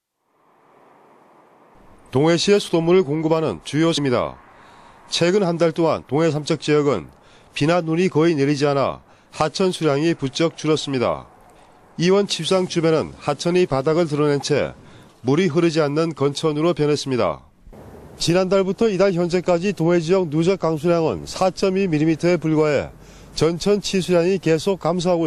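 At 3.97 s there is a brief burst of damaged data in a compressed stream: corrupted bytes make the decoder misread the frame and resync. It comes out as a short glitch.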